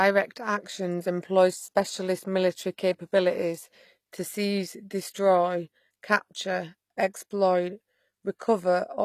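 Throughout, the s sounds turn gritty and lispy over a bright but artificial treble, likely HE-AAC compression rebuilding the top band from copied lower bands, consistent with roughly 24 kbps.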